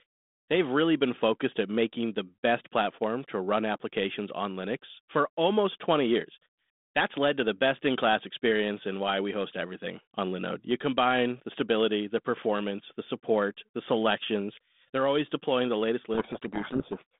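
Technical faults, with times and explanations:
16.14–17.17 s, codec payload misread: after "always deploying the latest", G.726 code words are decoded in the wrong bit order, burying the speech in harsh distortion.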